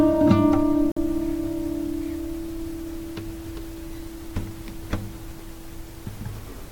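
At 0.92 s the music drops out abruptly and comes back at 0.97 s, leaving a silent hole of about 51 ms with hard edges on both sides, like a brief clean cut rather than a fade. This is a gap between stream segments: the timestamps of two consecutive chunks didn't meet, and the player filled the space with silence. Nothing is lost from the music itself; the playback is simply paused briefly, and the segment length implied fits chunks of about 6 s.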